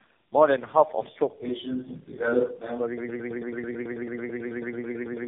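From the start, the speech carries tandem speech coding. It has been squeezed through three low-rate speech codecs in a row, each re-encoding the already degraded output of the one before. The sound is rough, muffled and warbly, with the character of a GSM full-rate, G.723.1 and AMR-NB chain joined by G.711 links. On a spectrogram, nothing sits above 3.6 kHz, and the harmonics look smeared and blotchy instead of forming clean striations.

At 2.98 s a broken-record loop takes over and runs to the end of the clip. A fragment about 110 ms long repeats exactly, back to back, 21 times, giving a stuttering, machine-gun buzz. The likely cause is a player, encoder or stream that stalled and kept resending its last buffer, so the audio that belonged there is lost. The waveform shows one identical short shape tiled over and over, and the spectrogram shows the same narrow slice copied side by side.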